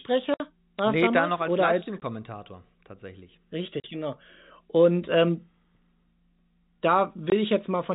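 Speech over a G.711 telephone path, with nothing above 4 kHz. It has packet loss filled with silence: hard dropouts at 0.34 s (60 ms), 2.00 s (20 ms, right after "da noch als"), 3.80 s (40 ms) and 7.30 s (20 ms). All four are multiples of 20 ms, which fits 20 ms packets being lost and replaced with silence by the receiver.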